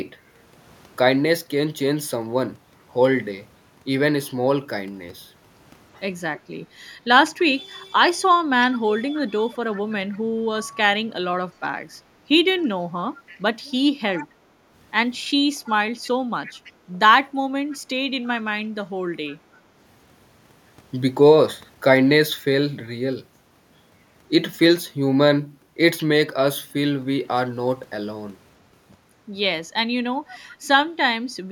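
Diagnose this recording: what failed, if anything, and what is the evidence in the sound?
Echo leak in call processing: a faint copy of the speech trails it by a constant 327 ms at 6.36–6.92, 9.11–10.65, 13.27–13.4, 14.16–14.27, 15.66–16.72, 17.76–18.27, 19.26–19.31 and 30.27–30.39 s. The likely cause is a far-end echo canceller that missed loudspeaker pickup. Room reverberation would smear continuously instead of repeating as a discrete copy at one fixed delay.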